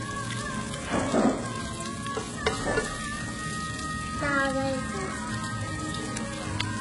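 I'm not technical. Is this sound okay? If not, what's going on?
No. Throughout, the treble sounds gritty and metallic, with nothing above 11 kHz. That likely comes from heavy HE-AAC compression rebuilding the top end from lower sounds.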